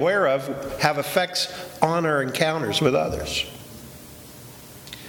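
Nothing in the audio stood out as a technical problem on listening.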